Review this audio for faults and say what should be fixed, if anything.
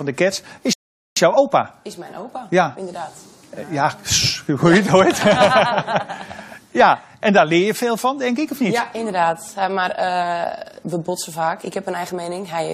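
A rebuffering stall runs from 0.73 s to 1.17 s. The sound drops abruptly to silence, then picks up again at the exact point where it stopped. Nothing is skipped or repeated. The gap simply adds 434 ms to playback. This happens when the player drains its downloaded audio faster than new data arrives, so it has to wait. To prevent it, build a larger buffer before playback starts and adapt the bitrate to the connection.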